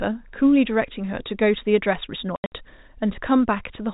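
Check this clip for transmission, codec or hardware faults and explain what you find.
One transmission fault stands out in this speech, carried over G.711 telephone coding, with nothing heard above 4 kHz.

Packet loss filled with silence occurs between 2.36 and 2.52 s. Across those 160 ms about 140 ms of audio never arrives, and the receiver plays silence in its place. The gaps sit in short runs, the longest 80 ms, which fits 20 ms packets. The sound drops out in abrupt holes, and each cut from signal to silence and back has a hard edge.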